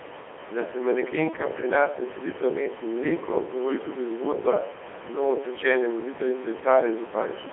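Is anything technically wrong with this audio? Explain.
Yes, the whole clip has been through the Codec 2 vocoder, and it's heavily damaged. Codec 2 doesn't keep the waveform. It sends only pitch, voicing, energy and a rough spectral envelope, and the decoder rebuilds the speech from sine waves. That's why it sounds robotic and buzzy from start to finish, squeezed into a 300 Hz to 3.4 kHz line band, with a coarseness that fits a rate around 2.4 kbit/s. The room noise underneath, about 18 dB below the speech, is part of the original recording and not a system fault.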